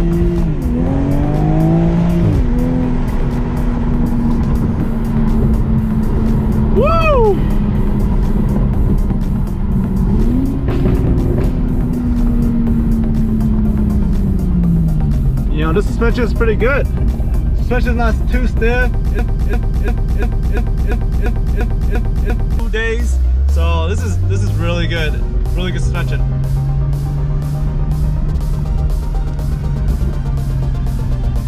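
From 19.19 to 22.6 s, a broken-record loop repeats one 0.35 s fragment ten times back to back, likely a stalled stream. Unlike stutter, the audio skips forward afterwards.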